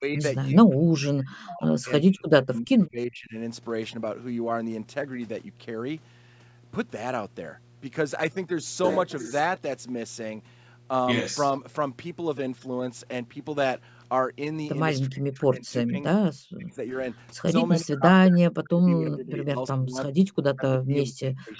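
A steady mains hum at 60 Hz runs under the whole clip, sitting about 25 dB below the speech. A ground loop or nearby transformer has coupled the power line into the signal path, giving a constant low drone.

The speech dips sharply at 0.0–0.22, 0.54–3.36, 15.06–15.98, 16.41–16.96, 17.37–17.5, 17.81–20.25 and 20.53–21.6 s. The shorter dips fall by roughly 20 dB and the longer ones by as much as 40 dB, with the talker fading or breaking into pieces. This is likely speech suppressed in double talk, where an echo canceller mistook the overlap for echo and attenuated the near talker.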